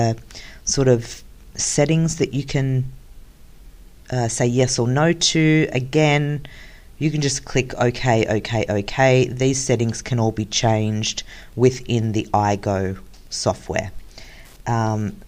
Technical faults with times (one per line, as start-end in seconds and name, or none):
11.30-15.27 Wi-Fi interference